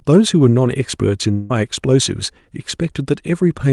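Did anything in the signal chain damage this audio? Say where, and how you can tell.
Yes, at the network stage. From 1.31 to 1.51 s the speech stops and a buzzy continuation of the last sound takes its place. It fades but never falls to silence. The real audio resumes at 1.51 s with about 0.18 s of it gone. The likely cause is a long network dropout. Packets stopped arriving, and the receiver's concealment stretched the last decoded frame across the gap. The call codec, band-limited near 12 kHz, is not the source.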